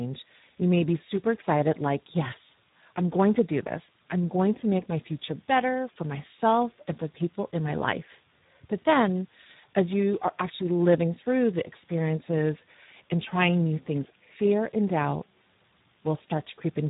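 A speech recording, damaged by the Speex codec throughout. The voice sounds noisy and hoarse. The codec damage is heavy. That fits a low-rate setting, around 8 kbps. At such rates the CELP coder has too few bits to rebuild the excitation that drives the voice. Nothing is left above 3.8 kHz. The top octaves are gone, so the sound is narrowband, like an old VoIP or game-chat call.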